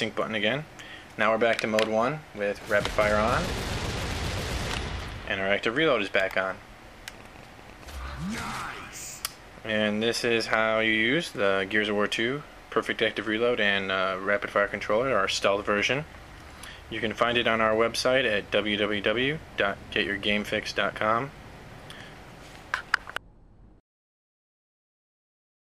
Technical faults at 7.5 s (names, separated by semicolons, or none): train of clicks